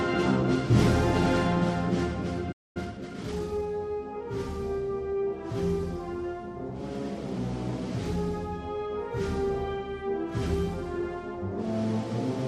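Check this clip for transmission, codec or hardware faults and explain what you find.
Two linked playback faults appear, both near the three-second mark.

From 2.52 to 2.77 s there is a playback stall: about 0.23 s of silence, likely the player starving for data.

From 2.77 to 3.69 s comes time-compressed catch-up: small pieces are cut and cross-faded to run at 1.25 times speed. The pitch stays put, unlike a sample-rate error.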